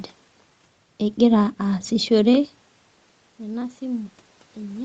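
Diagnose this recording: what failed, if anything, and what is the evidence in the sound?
Automatic gain rising in the call processing stage: from 3.37 s to the end of the clip, the speech and the room noise behind it swell together. After the input level fell by about 16 dB, the gain control judged the signal too quiet and raised its gain step by step rather than at once. On the waveform the envelope ramps upward smoothly. On a spectrogram the noise floor between syllables brightens along with the speech, across the whole band up to 8 kHz.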